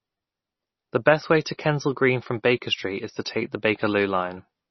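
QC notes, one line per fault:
Throughout, MP3 compression: the speech has nothing above 6 kHz and carries a heavy watery, swirling texture, with consonant onsets smeared and s sounds turned metallic and chirpy. This is likely low-bitrate MP3 encoding. Short of bits, the encoder cuts the treble at a fixed point and zeroes weak frequency lines, which flicker on and off between frames and cause the swirl. The damage level points to a bitrate around 24 kbps.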